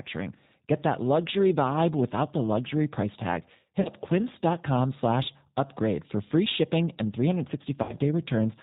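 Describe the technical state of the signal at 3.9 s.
VoIP packet loss concealed by the speech codec runs from 3.81 to 3.89 s, right after "the luxury price tag". About 40 ms of audio never arrived, which fits two 20 ms packets. The decoder filled the gap by extending its last pitch and vocal tract filter with falling gain, so the sound smears into a brief buzzy tone or coloured noise that fades. Because each frame builds on the one before, the speech at 3.9 s is still recovering and sounds weak or distorted.

G.729 codec coding is also present at this moment, as it is across the whole clip, and its damage is plainly audible. The speech is rebuilt from a vocal tract filter, a pitch predictor and a few pulses per 10 ms frame at a rate consistent with 8 kbit/s. The result is band-limited below 4 kHz, with a rough, synthetic texture. That coarse model also shapes the concealed segment described above.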